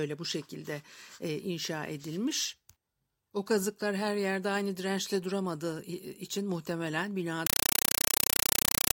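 From 7.47 s to the end, just after "dirençle duramadığı için muhtemelen", a compressed stream is played as audio: undecoded data, which fits an AC-3 bitstream, bursts out as loud static. Unlike random digital noise, it chatters at a steady 31.25 bursts per second, each about 5.33 ms of noise followed by silent padding.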